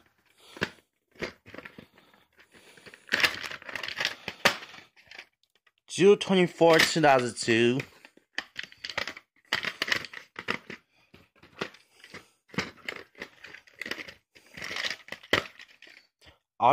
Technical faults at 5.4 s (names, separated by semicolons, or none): none